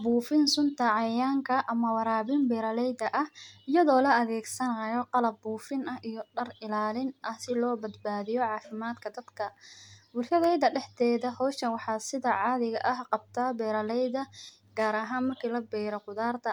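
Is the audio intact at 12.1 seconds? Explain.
Yes, the audio is intact at 12.1 seconds, with no dropout, click, distortion or other fault to be heard at that moment.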